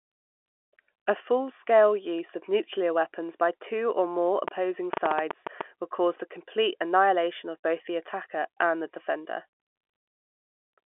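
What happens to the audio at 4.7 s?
A train of clicks runs from 4.48 to 5.62 s, likely from interference or a faulty connection injecting pulses. About ten similar clicks arrive at an uneven seven per second, popping well above the speech between "by two or more" and "would cause the complete".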